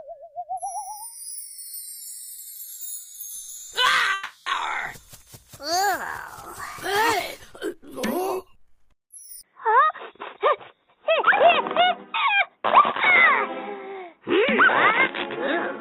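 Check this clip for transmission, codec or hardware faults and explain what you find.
Three faults can be heard: a call audio freeze, an input switch to a poorer device, and a jitter buffer speed-up.

From 4.13 to 4.48 s there is a call audio freeze. The sound stalls and is filled with a fading continuation for about 330 ms, with no silence. Delayed packets likely emptied the jitter buffer. Playback then resumes where it stopped, so nothing is lost, but about 330 ms of delay is added.

At 9.41 s the input switched to a poorer device, and this lasts to the end. A 20 ms silence marks the switch. After it nothing sounds above 3.8 kHz, so the tone turns dull. The level shifts by about 5 dB. A new faint noise floor sits about 50 dB below the signal. The likely cause is the recording moving to a narrower-band microphone.

From 9.66 to 9.91 s a jitter buffer speed-up follows. The sound runs at 126% speed with unchanged pitch, so it feels hurried. 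Roughly 70 ms of surplus buffered audio was trimmed, in short slices of a pitch period or so, to cut latency.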